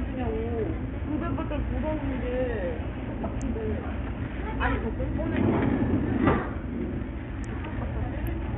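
An everyday-sound recording with heavy Bluetooth SBC compression from start to finish. The top end drops out and flickers rather than being cut cleanly, and a gritty, grainy noise with aliased tones rides on the sound, which points to a small bit pool at around 48 kbps starving the upper sub-bands. That coarse, evenly spread grit is what likely marks SBC, since a codec with a hearing model, such as AAC or MP3, would instead leave swirling, watery artefacts.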